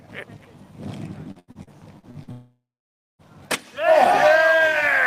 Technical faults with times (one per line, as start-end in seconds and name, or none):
1.31-2.30 repeated packet loss (robotic sound)
2.31-3.22 long network dropout